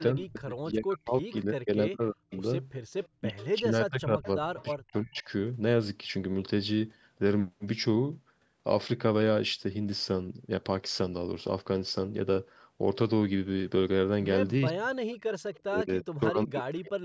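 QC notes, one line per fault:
0.12–2.44 s, 3.18–5.28 s, 14.69–14.98 s and 15.64–17.04 s, speech suppressed in double talk: the echo canceller likely mistook overlapping talk for echo and clamped both its own talker and the echo. The near talker dips or breaks up in pieces, by up to about 40 dB at worst.
2.31–2.38 s, 3.03–3.47 s, 4.24–4.65 s and 15.28–15.6 s, echo leak: the loudspeaker side's canceller likely let some microphone pickup through. A faint copy of the speech returns 350 ms late, about 20 to 30 dB below the speech, in short scraps.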